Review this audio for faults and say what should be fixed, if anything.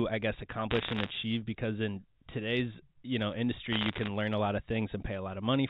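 Sharp ticks and crackle break over the speech in two bursts: 0.71 to 1.10 s, right after "I guess", and 3.73 to 4.08 s, after "in today's you know" and before "learn a lot of". These are bit errors on a digital phone line. Around one bit in a hundred is flipped in the G.711 stream, and each flip corrupts a single sample, with hits on high bits or the sign of loud samples making a tick. Clean the line or add error protection to stop the bursts.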